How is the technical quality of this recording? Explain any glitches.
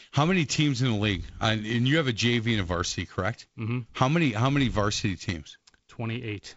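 No glitches or technical faults are audible anywhere.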